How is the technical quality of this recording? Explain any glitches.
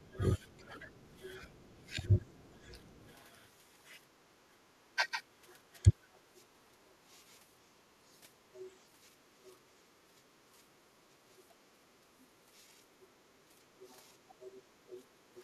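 The recording is impaired by echo-control problems for much of its length, typical of a hands-free call where both ends were active.

Speech suppressed in double talk occurs from 0.0 to 2.73 s and again from 4.95 to 5.88 s. The speech dips in pieces, by up to roughly 20 dB in the first stretch (about a second in total) and around 10 dB in the second (about a fifth of a second). This is likely the echo canceller, unable to separate the near talker from loudspeaker echo during overlap, pulling both down together.

The other side's voice leaking through is audible from 0.39 to 3.16 s, 4.2 to 9.56 s, and 10.85 s to the end. A second voice sits faintly underneath, around 25 dB below the main speech. The likely cause is incomplete echo cancellation: the far end plays on the device's loudspeaker, reaches the microphone, and the residual is not fully removed, so it rides along as a low background voice.

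Background gated by the echo canceller shows up briefly from 9.25 to 9.36 s. The room sound drops by about 7 dB for about a tenth of a second, then returns. This happens while loudspeaker output is present: the canceller clamps the microphone hard to suppress echo, taking the ambient noise floor down with it until it releases.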